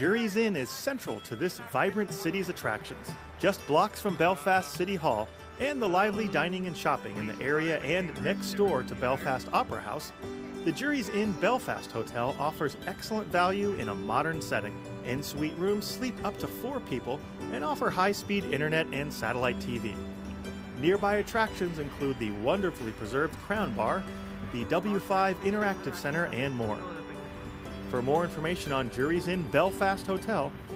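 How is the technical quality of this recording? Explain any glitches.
No technical faults are audible.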